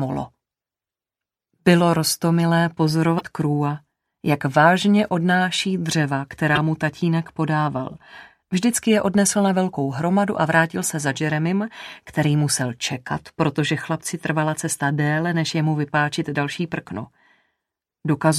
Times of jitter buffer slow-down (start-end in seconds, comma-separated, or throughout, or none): none